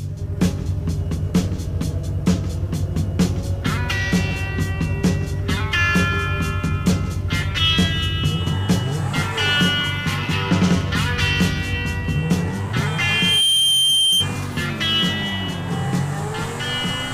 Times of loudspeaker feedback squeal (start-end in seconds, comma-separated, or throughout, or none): 12.84-14.29